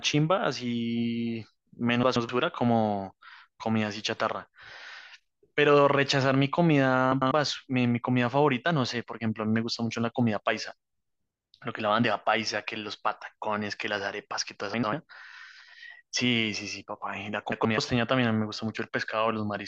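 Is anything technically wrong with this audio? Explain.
Yes, there's frames out of order in four spots: 2.03–2.29 s, 7.12–7.32 s, 14.74–14.93 s and 17.52–17.78 s. Two adjacent chunks of speech, each 96 or 128 ms, got decoded in swapped order, so you hear a garbled flutter.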